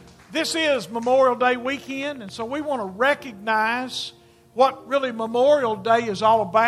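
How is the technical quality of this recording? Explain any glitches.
The recording has one clear glitch, a train of clicks. It runs from 1.41 s to 2.43 s. About ten sharp clicks arrive at a steady 7.9 per second, each roughly as loud as the sound itself. They share much the same shape and keep an even spacing, so they read as a regular ticking laid over the audio. A repeating pulse like this is likely interference from nearby equipment or a faulty connection or power supply.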